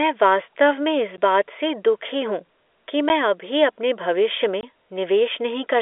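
Packet loss filled with silence cuts three brief holes into this telephone-band speech: at 1.17 s, at 3.09 s, and from 4.61 to 4.63 s. The first two gaps last 10 ms and the third 20 ms, which points to a 10 ms packet size with one and then two consecutive packets missing. The receiver substituted dead silence rather than concealing the loss, so the speech drops out abruptly with hard edges.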